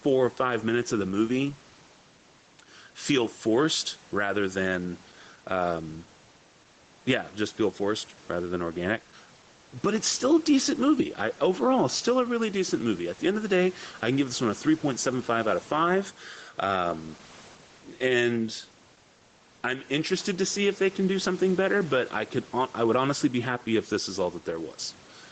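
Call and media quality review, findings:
Gain pumping throughout the speech, 0 to 25 s. Swing of roughly 5 dB. Likely cause: input gain set far too high, with a fast limiter or compressor clamping level on peaks. Dynamics squashed. Loud and soft passages sit close in level. Room noise, about 31 dB under the speech. Call path band-limited at 8 kHz.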